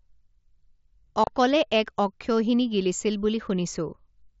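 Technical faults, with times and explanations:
1.24–1.27 s, unconcealed Bluetooth headset packet loss: a 30 ms hole with hard edges, just before "এক অক্ষৌহিণী গিলিছিল বুলি". Headset-to-phone packets were dropped and silence or an idle pattern took their place, a gap that fits about four 7.5 ms mSBC frames.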